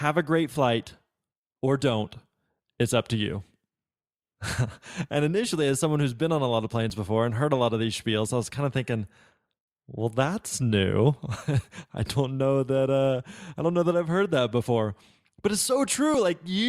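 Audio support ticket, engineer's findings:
Dropped buffer (overrun), 6.90 s: sound jumping ahead, between "on a lot of" and "before and heard a". A few milliseconds missing, no gap. Waveform: abrupt discontinuity; spectrogram: thin full-band vertical line. Likely capture buffer overwritten before being read.

16.14 s: same symptom, shorter skip of a millisecond or two. Narrow vertical streak, hard splice in waveform.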